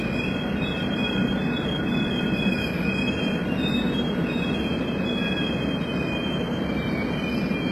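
HE-AAC compression runs throughout the clip. Nothing is heard above about 12.3 kHz, and the treble that remains sounds synthetic rather than recorded: upper bands seem copied up from lower ones and shaped only roughly, so their harmonics fail to line up with the body of the sound. The heavy damage is likely the work of spectral band replication at a very low rate, which fits HE-AAC v2 near 16 kbps, leaving the top end gritty and metallic.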